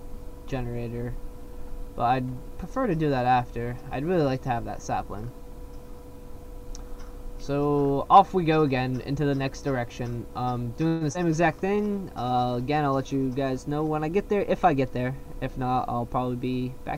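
At 10.87 s the audio stalls for about 135 ms, to 11.04 s. The last sound is stretched into a fading buzz rather than cut to silence, and then the audio resumes exactly where it left off with nothing skipped. That marks it as a call audio freeze, likely from packets delayed in transit so the jitter buffer ran dry. It differs from packet loss because the gap is inserted and all of the audio still arrives, which adds about 135 ms of delay. Moments later, from 11.13 to 11.18 s, comes short concealed packet loss. About 60 ms of audio never arrives, and only about 16 ms of synthetic continuation bridges the hole before blending back, so the result is a quick smear or wobble with material actually missing. Because the playout jumps forward, the delay shrinks by roughly 40 ms, the opposite of the freeze. Right after, from 11.25 to 11.84 s, a jitter buffer slow-down sets in. The receiver repeats individual pitch periods and slivers of pause to rebuild its reserve, adding about 52 ms over that stretch. 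Playback runs at 92% speed with the pitch unchanged, so sounds are drawn out rather than lowered. From 14.51 to 16.32 s the reverse occurs in a jitter buffer speed-up. The buffer holds more than its target, so the receiver trims short pitch-period pieces in rapid succession, removing roughly 150 ms. Playback runs at 108% with the pitch held steady, which sounds hurried rather than higher, and that distinguishes it from the slow-down.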